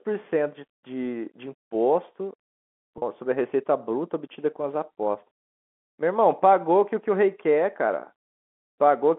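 At 2.98 to 3.02 s the speech briefly holds on a slightly buzzy, sustained sound. This is packet loss with pitch repetition: 40 ms went missing, which fits two 20 ms packets, and the receiver filled the gap by repeating the last pitch period.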